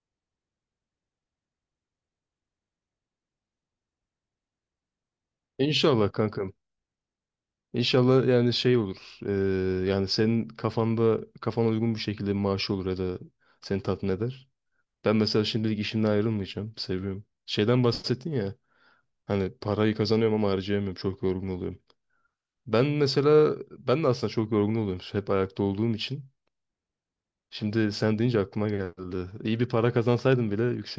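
No technical faults turn up at any point, so there is nothing to describe in time order.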